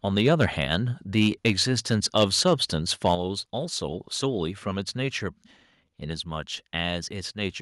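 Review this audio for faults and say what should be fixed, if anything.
Microphone overload: the loudest speech peaks are flattened with a harsh, crackling edge at 0.18–0.46 s, 0.74–0.76 s, 1.17–1.49 s, 1.91–2.49 s and 3.05–3.13 s, reaching about 6 dB over full scale at worst. The likely cause is input gain set too high, driving the converter into its ceiling. Prevent it by setting microphone gain so peaks stay several dB below full scale.

Microphone volume stepped down: at 3.15 s, right after the last distorted peak, speech and background drop together by about 6 dB in a single step. This is likely the call software reacting to clipping by cutting the device input volume. Prevent it by fixing the gain beforehand and disabling automatic input-level adjustment.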